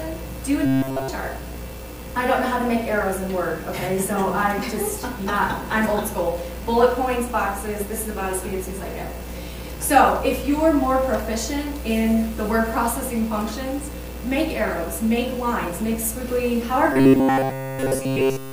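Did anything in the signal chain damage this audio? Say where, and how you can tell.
Yes. From 0.66 to 1.08 s, and again from 16.93 s to the end at 18.52 s, the sound collapses into a rigid, metallic buzz pinned at 133 Hz, with essentially all of it made of repeats. This points to the driver or buffer stage. The likely cause is robotic sound from repeated short buffers: fresh audio arrives too late, so a fragment of about 7.5 ms is looped in its place, and that loop rate sets the fixed pitch.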